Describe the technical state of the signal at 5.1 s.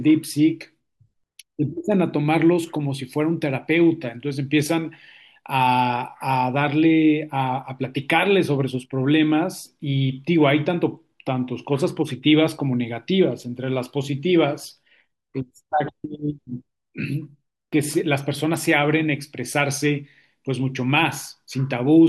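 At 5.1 s the speech signal is intact, with no audible fault at that moment.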